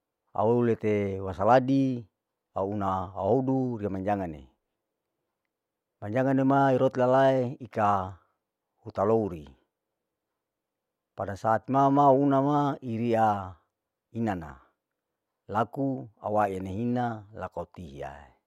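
No technical faults can be heard anywhere in the speech recording. Nothing in it calls for a time mark or an explanation of what went wrong.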